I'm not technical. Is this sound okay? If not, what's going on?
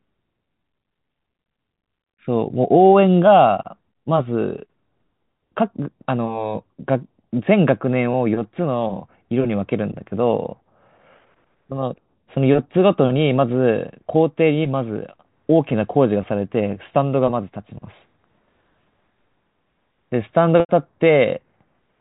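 No. There is packet loss with pitch repetition at 8.13 s and again from 20.6 to 20.69 s. Small chunks of the speech went missing in transmission, and the receiver covered each gap by replaying the last tiny cycle of the voice. The 8.13 s gap lasts only 10 ms, so it sounds like a brief buzzy hold. The 90 ms gap fades that repeat to silence before the speech returns with a quick blend.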